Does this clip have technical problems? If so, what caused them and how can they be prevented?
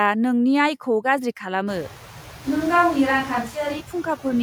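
Yes, two. Noise suppressor artifacts run the whole way through: it pulls steady noise down by about 4 dB frame by frame, so the background dips and swells with the speech. Easing the suppression strength or cutting noise at the source prevents this.

From 2.46 to 3.79 s the sound turns roomy, hollow and bass-light with barely any level change, most likely a switch to a distant microphone after the close one dropped out. Room noise there sits well below the speech. Checking the close mic's connection and battery prevents it.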